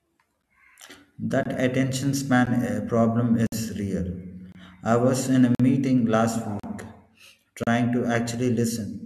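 Gaps between stream segments cut the speech at 0.42, 1.43 to 1.46, 2.46, 3.47 to 3.52, 4.52 to 4.55, 5.55 to 5.60, 6.60 to 6.64 and 7.64 to 7.67 s. Timestamps of consecutive one-second segments fail to meet, so silent holes of 10 to 55 ms with hard edges appear, delaying the sound without losing any.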